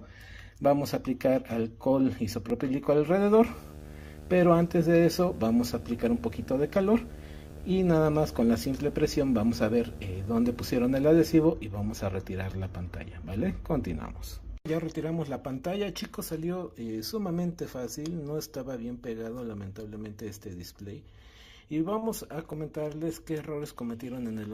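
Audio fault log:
2.50, 12.52, 17.52 and 22.53 s: overlapping chunks. The audio was processed in 5-second blocks, and each new block started about 7 ms before the previous one ended. That sliver of sound plays twice at each join and is heard as a brief click or stutter.
3.45 to 11.46 s: video or display buzz. A screen or video connection leaked its picture-refresh signal into the audio path. This adds a buzz at a 75 Hz field rate with harsh hash above it, sitting about 15 dB below the sound for roughly eight seconds.
21.98 to 22.04 s: short concealed packet loss. About 40 ms of audio failed to reach the decoder in time. The receiver filled the gap by extending the preceding sound and then blended back into the real signal, leaving a brief smear or wobble where the original was lost.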